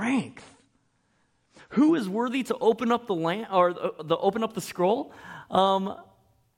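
Speech that opens as an adaptive stream starting at a low bitrate: until 2.0 s the audio is dull and nothing reaches above 9.9 kHz, which fits a low-bitrate start before the step up to a fuller version. Clarity returns abruptly with no gap just before "worthy to open up", unlike a dropout or a slow filter sweep.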